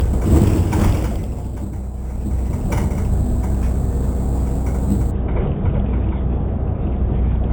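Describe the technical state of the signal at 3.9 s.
A bright metallic fizz about 28 dB below the sound, tracking its level, runs from 0.0 to 5.11 s. This is imaging from sample-and-hold upsampling: each sample was simply repeated to raise the rate from 8 kHz to 44.1 kHz, leaving mirrored copies that begin in the 4 to 8 kHz band.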